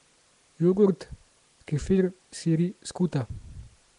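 Throughout the speech there is a plainly audible rough, hissy halo and a smeared, underwater quality, with nothing above 10.6 kHz. This is likely Nellymoser compression at a rate consistent with 44 kbps, starving weak bands of bits and filling them with noise.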